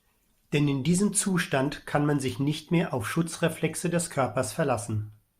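No technical fault can be heard anywhere in the speech recording; the signal stays continuous and intact throughout.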